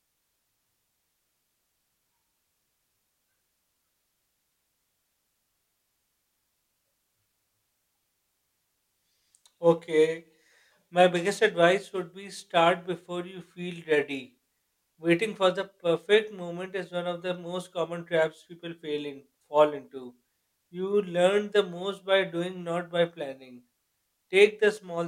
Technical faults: none

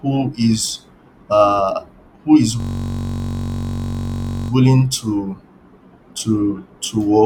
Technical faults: system hang loop

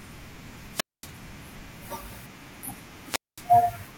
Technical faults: wireless microphone squelch dropout

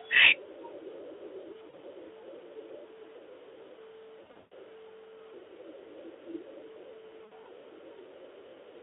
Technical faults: VoIP packet loss concealed by the speech codec

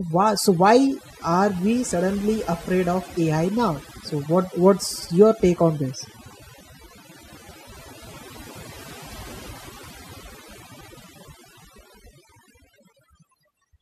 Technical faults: overdone noise removal

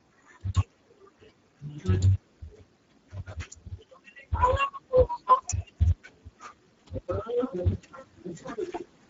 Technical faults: Speex codec

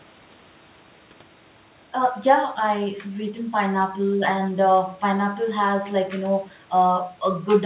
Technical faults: none

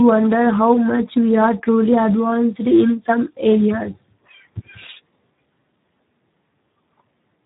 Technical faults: Speex codec

